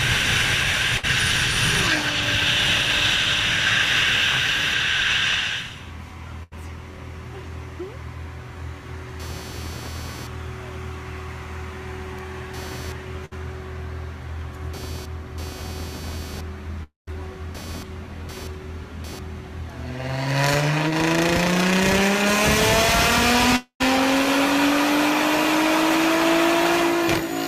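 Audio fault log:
throughout: computer activity noise, a buzzy chirp pulsing around 300 Hz about 20 dB under the sound, rising and falling with the machine's load rather than the audio.
0.97–1.05 s, 6.43–6.53 s, 13.25–13.33 s: burst of packet loss. The receiver held the last sound for 58, 82 and 58 ms, then jumped ahead past 60, 80 and 60 ms of audio.
16.83–17.09 s, 23.56–23.82 s: a held, fading sound of about 240 ms, ending in silence for 150 and 90 ms before the audio resumes with a chunk missing, likely a long network dropout.
20.88–20.92 s: short concealed packet loss, a quick smear where 19 ms of continued sound patched over 20 ms that never arrived.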